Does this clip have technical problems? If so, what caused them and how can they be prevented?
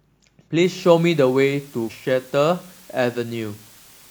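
Yes. From 0.63 s to the end there is low bit depth with dither: an even, constant hiss roughly 25 dB below the speech, which fits an 8-bit signal. Rounding to so few levels, with random noise added first, turns the error into steady noise rather than the gritty, level-following distortion of undithered quantization. Keeping 16 or 24 bits throughout the chain prevents it.

At 1.86–1.92 s, damaged data in a compressed stream produces a brief disturbance. Corrupted bytes make the decoder misread frames and lose sync, so it has to search for the next frame header. Checksummed storage and error-checked transfer prevent it.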